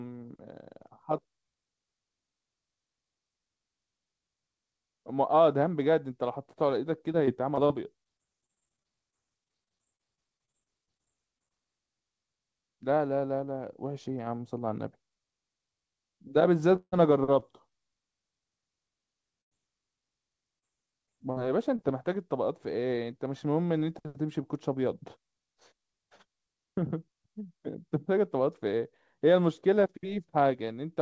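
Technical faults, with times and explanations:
7.12–11.52 s and 20.59–21.80 s, repeated packet loss (robotic sound): The speech turns choppy and metallic, with small pieces dropping out again and again. The first run has about 30 short holes, none longer than 30 ms, with roughly 0.55 s of patched audio across 4.4 s. The second has four holes of up to 40 ms. Each time a packet failed to arrive, the receiver stretched the preceding sound to cover it. Those repeated stretches give the mechanical texture.
16.76–16.94 s, long network dropout: The speech stops and turns into a held, fading buzz or hiss for roughly 0.12 s, then goes silent for about 40 ms. It resumes with around 0.16 s of the original missing. No audio was likely arriving over that stretch. The receiver carried the last sound forward and faded it out until real packets returned, and the span it bridged is lost.
17.40–17.44 s, short concealed packet loss: A brief smear or wobble lasting a few hundredths of a second. 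About 20 ms of audio never reached the decoder in time. The receiver extended what came just before to cover the hole, then blended back into the incoming signal. Because the patch is so short, it comes across as a blip rather than a clear break in the speech.
19.41–19.53 s, burst of packet loss: A short held buzz or hiss that fades, and then the speech picks up slightly further along. About 100 ms in a row was lost or arrived too late to play. The receiver continued the last sound and turned it down as the gap went on, which produces the fading tail. Whatever was said in that 0.1 s is gone.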